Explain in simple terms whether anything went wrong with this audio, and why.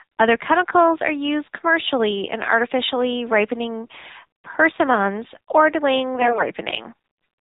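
The whole clip went through the AMR narrowband mobile codec used on older phone networks. Everything above 4 kHz is cut away. The speech sounds thin, muffled and somewhat buzzy, with a synthetic edge. The low bit budget makes that damage plainly audible.

From 6.15 to 6.51 s there are AMR bit errors. A weak radio link flipped some of the less protected data bits. The voice keeps its rough pitch and loudness. But it turns hoarse, scratchy and gargly for that moment.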